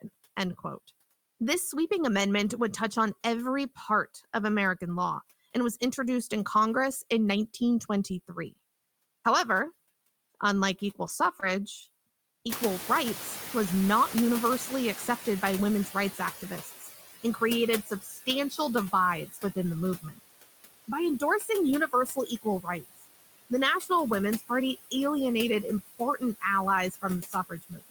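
Noise suppressor artifacts run through the whole clip. The suppressor pulls steady background down by about 16 dB, frame by frame. The residue sinks between phrases and rises under the speech.

Just after "unlike equal", at 11.08 s, a lost packet rebuilt from error correction plays. The decoder used the low-bitrate copy carried in the next packet. That 20 ms patch sounds rougher and noisier. There is no gap.

At 11.40 s comes a short concealed packet loss. About 20 ms never arrived in time. The decoder extended the preceding sound for 15 ms. At 11.41 s a second lost packet was rebuilt from error correction, covering 20 ms. The concealment leaves a brief smear or wobble.

Around 12.5 s the room noise jumps by about 20 dB. It then sits about 12 dB below the speech. The suppressor is caught out and has to catch up. Its noise estimate lags, so the louder noise leaks through at first. It adapts over about 4.3 s and settles near 11 dB of reduction by 16.8 s.

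From 16.14 s on, speech is cut by the noise suppressor in four stretches. The first runs 16.14 to 18.59 s, with about half a second affected. The second runs 19.28 to 20.20 s, with a fraction of a second affected. The third runs 20.88 to 24.94 s, with about 0.7 s affected. The last runs from 25.63 s to the end. The suppressor mistakes parts of the speech for noise. It turns them down by up to about 12, 11, 22 and 21 dB in turn. They sound swallowed and faint, worst in the last two stretches.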